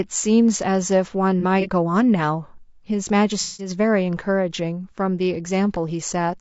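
Throughout, the speech sounds rough and grainy. Noise fills the gaps between harmonics, and the top band sounds thin and synthetic. This is likely low-delay AAC compression, as in AAC-ELD. Its short frames resolve pitch poorly, and the damage fits a low bitrate around 32 kbps.

From 1.40 to 1.66 s there is AAC frame loss with concealment. About 60 ms goes missing in short gaps of around 30 ms, spread over 240 ms. The decoder patches each gap from the last good spectrum, leaving brief smeared, phasey blurs. From 3.41 to 3.70 s a larger 180 ms is lost. The concealment fills it in from the old spectrum.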